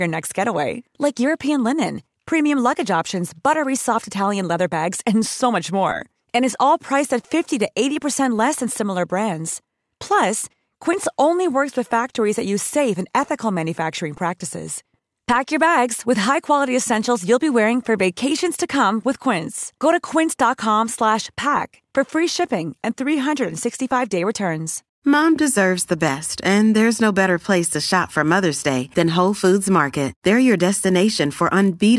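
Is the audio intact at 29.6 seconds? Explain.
No. From 27.3 to 31.8 s, starting just after "best and there's no", the speech carries a resampler restarted on every block fault. Each chunk was converted on its own, as if in a halving of the sample rate such as 48 kHz to 24 kHz, so every chunk edge lacked its true neighbouring samples and picked up a small error. The ticks recur at 50 Hz, which fits 20 ms blocks, and merge into a buzz. Unlike mains hum at that frequency, the buzz sounds only while speech is present and vanishes in the pauses.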